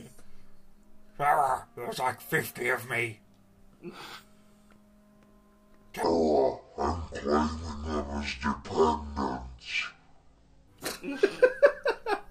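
A section at the wrong speed runs from 6.03 to 10.68 s, playing at 0.548 times normal speed, likely from the wrong clock, so everything drops about ten semitones, slow and deep.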